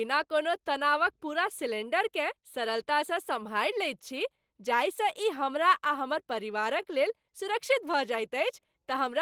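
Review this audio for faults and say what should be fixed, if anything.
The speech has a faint, unsteady drag from start to finish, with small stumbles recurring at uneven gaps rather than one obvious break. This is clock drift between sender and receiver: the sender's audio clock runs about 1.5 percent slower than the receiver's. The receiver's jitter buffer keeps running short, so it must pad out the stream to stay fed, and the timing never settles. Prevent it by running adaptive clock recovery that tracks the sender's rate and resamples smoothly.

From 0.42 s to 8.81 s the pace feels slightly stretched, with brief hiccups where tiny pieces of sound seem doubled. These are repeated timing corrections. Because the slower sender delivers too little audio, the receiver repeatedly inserts short copied fragments, all in the same lengthening direction and unevenly spaced. The result plays at about 98 percent speed and adds roughly 150 ms overall. 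Prevent it by replacing discrete repeat-and-cut edits with continuous, inaudible sample-rate adjustment.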